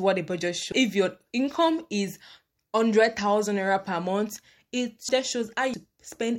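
Speech with compressed frames skipped at 0.72, 5.09 and 5.74 s. Each time, the audio jumps ahead by roughly half a second, 0.7 s and 0.4 s: whole 92.9 ms frames, about seven, ten and four of them, never played.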